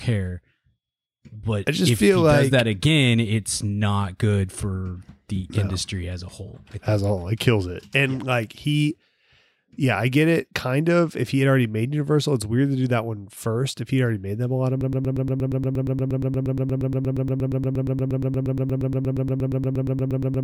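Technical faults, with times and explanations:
14.81–20.44 s, broken-record loop: playback likely stalled and replayed its last 118 ms fragment about 48 times to the end, losing the speech that should follow.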